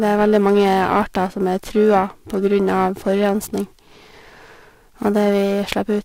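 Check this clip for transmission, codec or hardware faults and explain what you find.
Periodic clock jitter runs through the whole recording. A converter clock wobbling at around 1 kHz puts sidebands either side of each speech component, giving a rough, metallic edge, strongest on sibilants, that disappears in pauses, unlike a steady hum or hiss.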